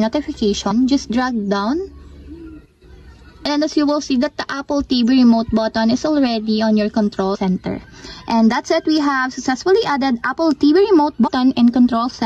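The audio has compressed frames skipped at 0.70 s, 7.34 to 7.36 s and 11.26 to 11.29 s. Each jump loses roughly 70 to 100 ms, matching a few 23.2 ms frames.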